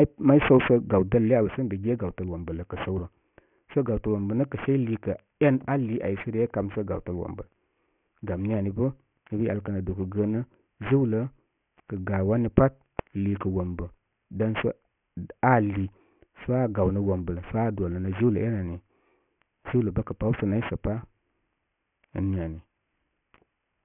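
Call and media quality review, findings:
Aliasing throughout. Sibilants gritty and metallic, spectrum packed hard up to 3 kHz. Fits an unfiltered downsample to 6 kHz; folded energy fairly strong, roughly 15 dB below speech.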